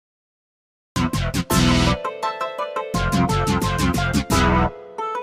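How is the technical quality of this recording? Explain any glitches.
The recording has one clear glitch, a cut-off start. For the first 0.96 s there is nothing but dead digital silence, and at 0.96 s the audio appears abruptly, already partway through a sound, with no natural attack or fade-in. The likely cause is that capture or playback of the stream began late. The opening of the sound was never recorded, so the file jumps from silence straight into material that was already under way.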